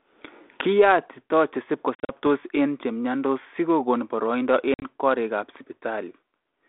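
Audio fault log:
1.95–2.10 s and 4.74–4.87 s: packet loss on an ADPCM call. Hard-edged silent gaps, 110 ms lost across 140 ms and then 70 ms across 80 ms, with the longest holes 40 and 50 ms. Afterward, the decoder's predictor and step size disagree with the sender's, so the narrowband G.726 speech returns slightly distorted before resettling.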